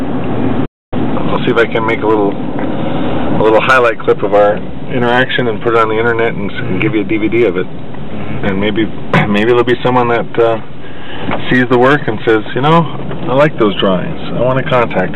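The audio drops out in a playback stall from 0.65 to 0.93 s, a gap of about 0.26 s, most likely because the player ran short of data or its thread was blocked. It resumes straight into time-compressed catch-up from 0.93 to 1.19 s, where the backlog is played back at double speed at unchanged pitch.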